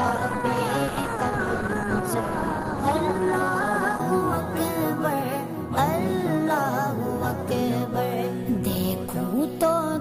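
The audio opens on an adaptive stream starting at a low bitrate. From 0.0 to 4.0 s, nothing reaches above 12 kHz and codec artefacts are heavier. That fits an Opus stream near 16 kbit/s. At 4.0 s the player steps up, probably to about 64 kbit/s. The treble returns abruptly, without a gap.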